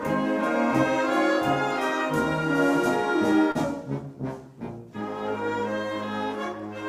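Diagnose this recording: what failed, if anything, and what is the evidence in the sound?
The network stage failed briefly: a short concealed packet loss at 3.51 to 3.57 s. About 40 ms of audio never arrived in time, and the receiver covered roughly 34 ms of that by extending the preceding sound, either from its pitch or as shaped noise, before crossfading back into real audio. The result is a brief smear or wobble rather than silence or a click, which separates it from a plain dropout or a buffer underrun.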